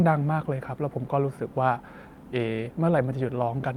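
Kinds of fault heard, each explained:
No technical faults can be heard in the speech.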